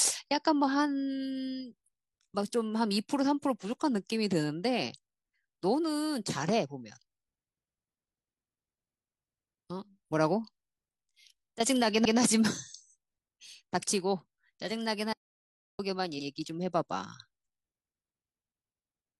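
At 12.01 s the speech stutters. A 128 ms block, which fits a run of about three compressed frames, plays twice. These are repeated frames. At 16.15 s a shorter 85 ms block, about two frames, repeats the same way. Each repeat lengthens the audio slightly.

From 15.13 to 15.79 s the speech cuts out to dead silence, with no room tone. This is an audio dropout to silence. The input was likely lost while the recorder kept writing silence. About 0.66 s of speech is gone.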